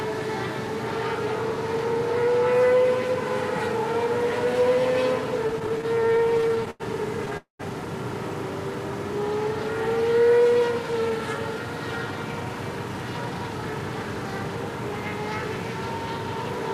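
From 5.47 to 6.82 s the everyday sound stutters: repeated stalls, about 22 short gaps, the longest 92 ms, together roughly 305 ms or nearly a quarter of that stretch. Packets kept arriving behind playback, so the jitter buffer kept emptying and the last sound was stretched each time. Nothing is lost; it drags in choppy bursts.

At 7.37 s a single call audio freeze follows, lasting 0.24 s. The sound hangs as a fading buzz, then about 120 ms of silence, before resuming where it stopped. Unlike the stutter, it is one longer held-up gap, likely from packets delayed in transit.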